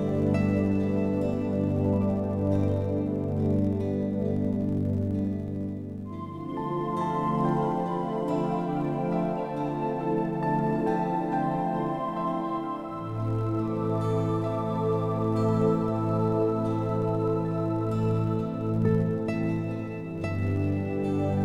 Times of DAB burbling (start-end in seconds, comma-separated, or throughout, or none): none